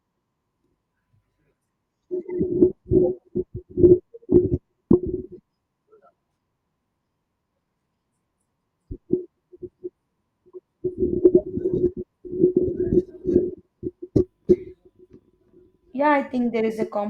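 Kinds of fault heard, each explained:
Compressed frames skipped: Whole frames of the coded speech never play, so the audio lurches forward. About 70 ms vanishes around 2.71 to 2.74 s, and about 40 ms at 11.43 s, jumps that fit 20 ms frames.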